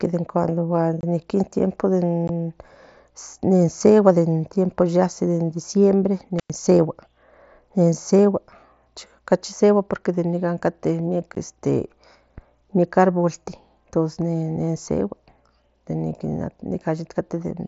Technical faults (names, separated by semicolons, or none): unconcealed Bluetooth headset packet loss; intermittent contact